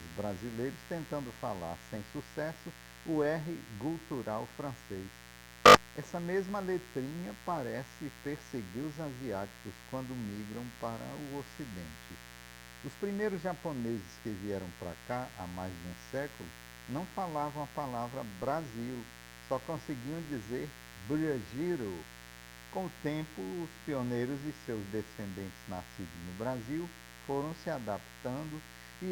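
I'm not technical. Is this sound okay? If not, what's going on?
No. A mains buzz runs through the whole clip, a steady raspy drone sitting fairly loud under the sound. Electrical interference from 60 Hz mains power is leaking in, and unlike a smooth low hum, it sounds harsh and gritty because it carries many higher overtones.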